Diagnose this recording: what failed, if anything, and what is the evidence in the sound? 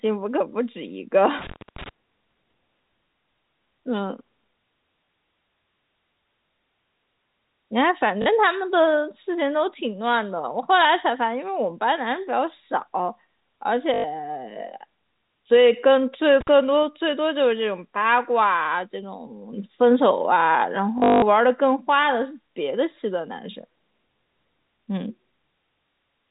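Analogue wiring first: an intermittent contact opens the line at 1.39 to 1.89 s, dropping out for about 250 ms, and again at 16.41 to 16.49 s for about 48 ms. Each gap has crackly edges and faint hiss underneath, the signature of a loose plug or cable.

The network stage shows packet loss with the last packet repeated at 5.06 to 5.08 s (20 ms), 8.22 to 8.26 s (40 ms), 13.94 to 14.04 s (100 ms), and 20.98 to 21.22 s, where losses scatter over 240 ms with a longest run of 180 ms. The receiver replays stale audio, so the single repeat at 5.06 s is a small blip and the longer runs give a robotic buzz. That buzz sits around 50 Hz, which fits 20 ms packets, all riding on the G.711 A-law telephone band.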